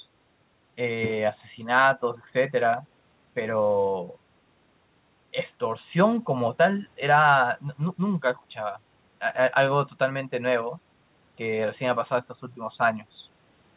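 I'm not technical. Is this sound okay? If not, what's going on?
Yes, nothing stood out on listening; the speech has the narrow sound of an ordinary phone-style call line, with nothing above 4 kHz, and that is how such a line normally sounds.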